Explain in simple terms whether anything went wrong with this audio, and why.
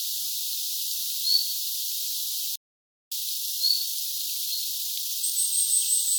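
Something did go wrong. At 2.56 s the sound cuts off mid-flow and goes silent until 3.12 s, a gap of just over half a second, before picking up again. This is a playback stall. It points to the player running out of audio data or being briefly held up by something else on the device, most likely a delay in data arriving or a busy processor, so it had nothing to send to the speakers.

From 3.12 s to 5.34 s the audio sounds rushed, running about 1.25 times faster than normal, yet its pitch stays the same. This is time-compressed catch-up. Having fallen behind during the stall, the player trims away tiny slices of sound and blends the joins together, shrinking its backlog until it is back on schedule.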